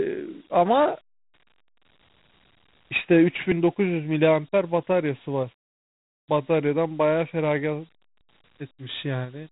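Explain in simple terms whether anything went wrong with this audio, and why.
The whole clip has been through Dialogic VOX ADPCM, the old phone-system format. Each sample is squeezed into a tiny 4-bit step guess, leaving a gritty hiss riding on the speech, and nothing above 3.8 kHz survives, so it sounds thin and phone-like.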